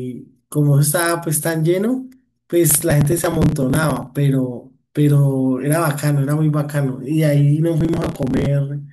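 From 2.70 to 4.07 s and again from 7.81 to 8.46 s, the speech tears into gritty processor overload crackle. Dozens of buffers a few milliseconds long are skipped, leaving hard-edged gaps that show as tiny notches in the waveform and dense vertical broadband streaks on a spectrogram.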